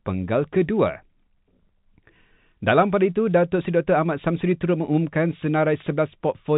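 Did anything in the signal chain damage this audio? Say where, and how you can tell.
No, nothing in the chain damaged this speech.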